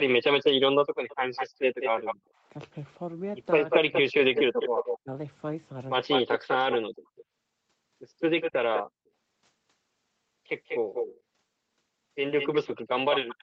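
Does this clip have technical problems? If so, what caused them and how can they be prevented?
Yes. There's an echo leak at 1.08 to 2.15 s, 3.7 to 8.83 s and 10.66 s to the end. A copy trails the speech by 193 ms, only slightly quieter, likely from a far-end loudspeaker getting past its echo canceller. Using headphones on that end or tuning its echo canceller would stop it.

From 2.15 to 2.46 s the background is gated by the echo canceller. The room sound drops by about 40 dB for roughly 300 ms while it clamps the mic. A gentler suppression setting keeps that floor steady.

Between 3.65 and 6.67 s the speech is suppressed in double talk. It dips very deeply for around a second in total, likely because the canceller mistook overlapping talk for echo. Better double-talk detection, or less overlap between talkers, avoids it.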